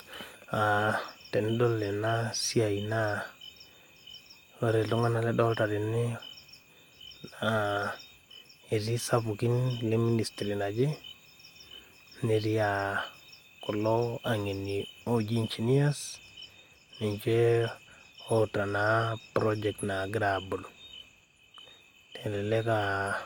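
No technical faults can be heard anywhere in the speech signal, which stays continuous and intact throughout.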